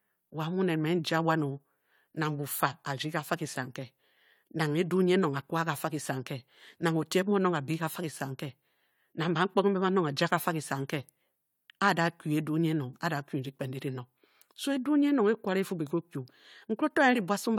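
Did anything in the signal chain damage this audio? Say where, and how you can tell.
No, nothing along the chain seems to have harmed this speech recording, and I can't hear anything that points to a problem at any stage.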